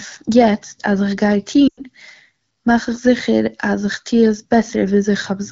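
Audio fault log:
1.68–1.82 s, lost AMR speech frames: about 100 ms dropped, so the decoder stretches the last good sound and fades it quickly to silence.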